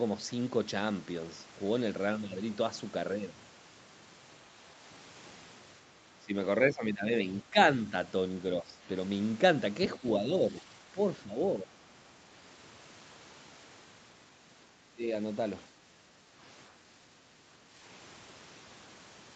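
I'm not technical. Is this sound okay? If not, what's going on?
No. The talker keeps getting briefly squashed, most likely a case of speech suppressed in double talk. When both ends of a call talk at once, the echo canceller can't tell this person's voice from the other side's sound coming out of the loudspeaker, so it turns everything down. You hear the voice dip, go dull or break up at 6.2, 6.73 to 7.88, 8.62, 9.98 to 11.73, 14.88, 15.68 to 16.33 and 17.7 seconds.

There's also one moment of background gated by the echo canceller, from 17.14 to 17.45 seconds. The room sound behind the voice drops away for a fraction of a second while the loudspeaker is playing, then comes back once the canceller relaxes its grip.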